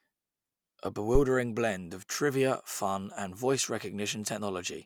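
At 1.15 s, a supply on the live microphone input, most plausibly phantom power, was switched, and the sudden voltage step travelled through the input's coupling capacitors into the signal path. The result is a phantom power thump: a deep, dull thud running from 1.15 s to 1.24 s that peaks at about -14 dBFS and dies away quickly, with a decay of about 19 ms, punching a low-frequency bump into the speech.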